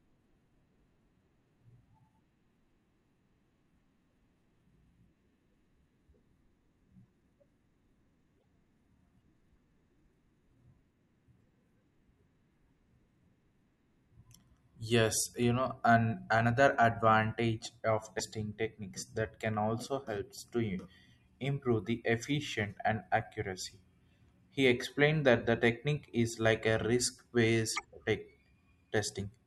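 At 8.37–8.45 s and again at 18.18–18.21 s the speech jumps ahead with a brief chirp, burst of noise or short hole, likely a broken MP3 bit reservoir, where frames decode borrowed data from the wrong 24 ms frame.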